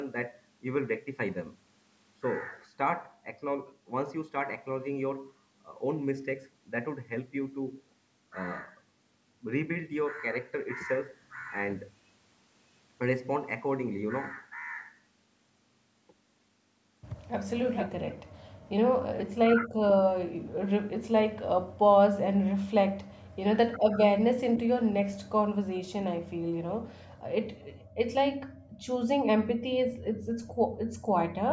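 Echo leak, 17.56 to 18.14 s: a delayed copy of the speech arrives about 447 ms behind the original, only a few decibels quieter. The far end's loudspeaker sound is heard coming back, likely because its echo canceller left part of the microphone pickup uncancelled.

Background gated by the echo canceller, 18.26 to 18.7 s: the room tone drops by about 40 dB for roughly a fifth of a second in total, then returns. The canceller clamped the microphone hard while its loudspeaker was active, so the ambience briefly vanishes.

Speech suppressed in double talk, 19.05 to 19.59 s: the speech dips and breaks up in pieces, losing up to around 40 dB over a total of nearly half a second. The likely cause is both sides talking at once, with the canceller unable to separate its own talker from the echo and turning both down.

The background gating returns from 20.39 to 22.44 s, with about 40 dB drops covering roughly half a second in short holes. 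Double-talk suppression recurs from 23.38 to 25.47 s, again chopping the speech for nearly half a second overall. From 26.24 to 31.13 s, the gating cuts the room sound by about 40 dB for around two seconds in total.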